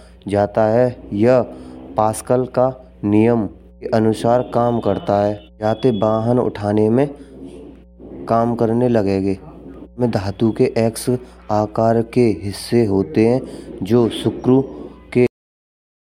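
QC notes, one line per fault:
15.27–16.12 s, cut-off end: the speech stops abruptly mid-sound at 15.27 s and falls straight to digital silence. There is no decay or tail. The final stretch of audio was never written out, so the sound simply ends.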